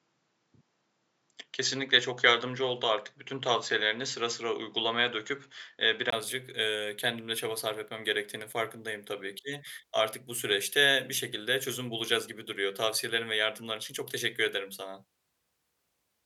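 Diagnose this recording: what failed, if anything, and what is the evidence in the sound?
Input switched to a poorer device, from the start to 6.12 s. For that opening stretch the speech is band-limited, with nothing above 7.6 kHz, so it sounds dull and boxy. At 6.12 s there is a brief gap of about 20 ms, and then the full bandwidth returns with "ııı kendim de çaba". The level stays roughly the same, and the first device adds only a faint noise floor. This likely points to the capture stage starting on a narrower-band microphone or headset profile and then changing to the proper input partway through.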